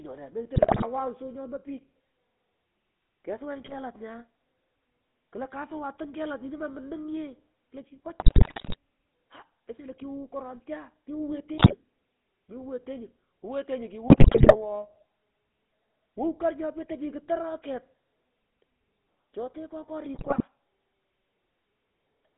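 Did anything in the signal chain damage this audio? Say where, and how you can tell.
Yes. At the codec stage, GSM full-rate codec damage runs through the whole clip. The speech sits in roughly 200 Hz to 3.6 kHz and has the buzzy, gravelly grain of pulse-driven vocal-tract modelling with a thinned excitation, which fits 13 kbps full-rate GSM.

On the radio link, GSM bit errors break the speech into squawks, pops and gargling at 0.54–0.85, 3.58–3.76, 8.2–8.76, 11.58–11.75, 14.08–14.56 and 20.14–20.44 s. Corrupted filter, pitch or gain parameters reached the decoder, bending the spectrum or jumping the level frame by frame.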